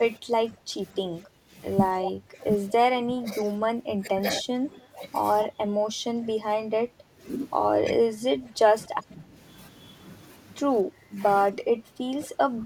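Speech suppressed in double talk runs through this speech clip at 0.18 to 1.54 s, 1.95 to 2.45 s, 2.9 to 5.01 s, 5.46 to 7.22 s, 7.82 to 9.35 s and 10.84 s to the end, where the voice dips by up to about 15 dB or breaks up. This is likely an echo canceller muting both talkers at once. Echo leak appears at 2.02 to 2.11 s and 4.38 to 4.43 s as brief faint copies about 240 ms behind the voice, about 10 to 15 dB down, probably loudspeaker pickup that the far end's canceller missed.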